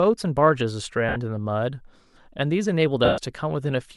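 Speech with two dropouts from lost LE Audio frames, at 1.09 to 1.16 s (about 70 ms, which fits seven 10 ms frames) and at 3.05 to 3.18 s (about 130 ms). The LC3 decoder conceals each gap by repeating the last spectrum with randomised signs, so the voice turns into a noisy smear. In the longer gap the concealment fades toward silence. Light lossy compression is also present underneath.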